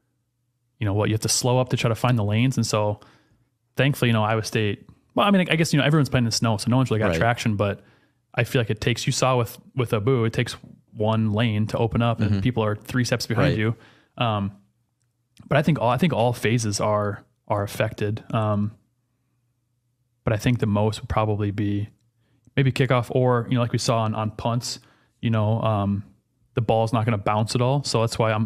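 No technical faults can be heard at any point in this speech recording. There is nothing to place on a timeline or trace to a cause.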